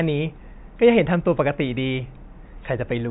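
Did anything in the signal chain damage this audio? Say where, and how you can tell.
No, nothing in the signal chain audibly damaged this speech recording at any stage.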